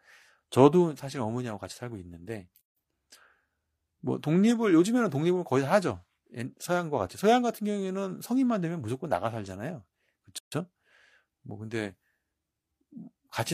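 The speech was encoded in separate pieces and joined without trimming, so each join keeps the encoder's start-up delay and the padded final frame. At 2.61 s a silence of 152 ms breaks into the talking, and at 10.38 s a second gap at a join of encoded pieces lasts 138 ms. Both open with edges smeared by the codec, and the speech resumes exactly where it stopped.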